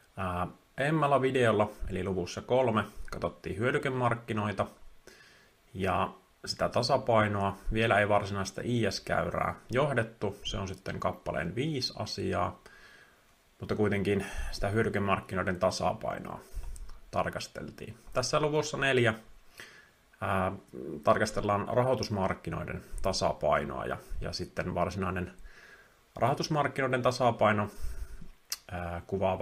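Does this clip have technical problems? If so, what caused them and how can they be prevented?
No, the signal holds steady throughout, with no technical faults to trace or prevent.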